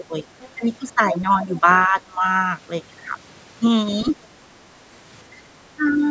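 From 0.0 to 0.25 s the speech dips by around 10 dB, likely speech suppressed in double talk: with both sides talking at once, the echo canceller turned the near talker down along with the echo. At 0.4 to 0.49 s a faint second voice, roughly 25 dB below the speech, comes through, likely the other side's voice leaking through from a loudspeaker echo the canceller did not fully remove. The same double-talk suppression returns more heavily between 0.95 and 2.25 s, where the speech is pulled down by as much as about 20 dB in pieces. From 4.56 to 4.85 s the room sound drops by about 6 dB for a moment, background gated by the echo canceller while the loudspeaker was playing, then recovers. Two more double-talk dips follow, a brief shallow one at 5.31 to 5.35 s and one of around 10 dB at 5.76 to 5.98 s. The call microphone processing passes nothing above 8 kHz.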